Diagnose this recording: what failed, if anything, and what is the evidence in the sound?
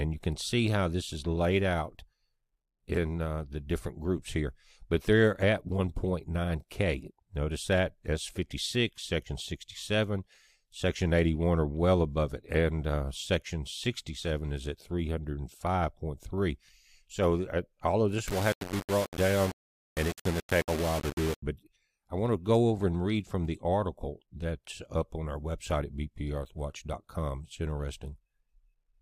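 Between 18.28 and 21.42 s, a sample-format conversion stage likely rounded the audio to low bit depth without dither, fitting a 4-bit word length. Because the rounding error follows the signal, the sound turns grainy and gritty, with distortion only about 10 dB below it.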